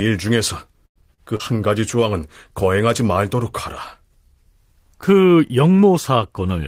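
Speech, with three network faults bunched into about half a second. From 0.85 to 1.05 s the last sound is carried on as a fading buzz and then drops to near silence before the talker returns. About 60 ms of speech is gone and the timing shifts by roughly 50 ms. The likely cause is a long network dropout. On a spectrogram this shows as smeared, decaying harmonics followed by a blank gap. At 1.14 to 1.21 s a short stall from a late packet holds the current sound about 41 ms too long, with nothing lost. It appears as a flat, stretched band where the formants stop moving, and the audio after it sits 41 ms later. At 1.36 to 1.42 s a short concealed packet loss replaces about 60 ms of speech with 37 ms of synthetic continuation, which is heard as a brief wobble. The waveform shows a slightly mismatched patch, and the timing pulls back by roughly 20 ms.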